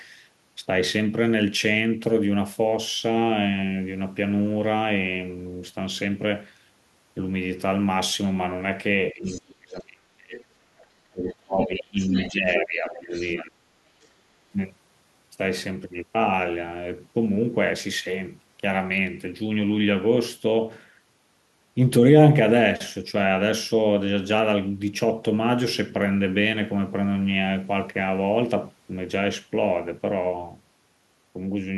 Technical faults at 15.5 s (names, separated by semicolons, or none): none